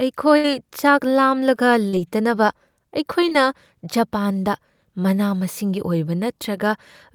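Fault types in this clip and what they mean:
Burst of packet loss: From 0.37 to 0.48 s, a run of audio failed to arrive in time. The receiver stretched the last sound it had for about 63 ms, letting it fade as a held tail. About 60 ms of the real speech never returns, so the talk jumps ahead when it resumes. The stretch also adds roughly 14 ms, nudging the timing later.
Short concealed packet loss: Two brief holes appear, at 1.89 to 1.95 s and at 3.29 to 3.33 s. Each time, the receiver continued the preceding sound to cover the gap, then blended back into the real speech. The first patch lasts about 35 ms and replaces about 40 ms. The second patch lasts about 21 ms and replaces about 20 ms. They come across as a quick smear or wobble.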